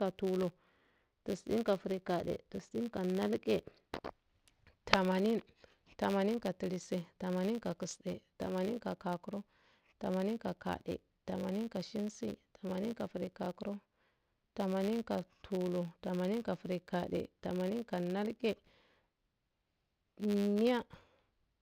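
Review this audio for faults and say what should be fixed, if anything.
Filter restarted on every block, throughout the speech: each 10 ms block starts from zeroed state, producing a transient buzz at 100 Hz that tracks the level. Carry the filter's state across block boundaries instead of resetting it for each block.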